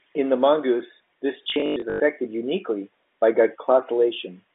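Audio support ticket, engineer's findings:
Robotic stutter 1.44–2.0 s, after "the mongoose this". Packet loss with last packet repeated: 300 ms concealed, runs up to 100 ms, buzz fits 20 ms packets.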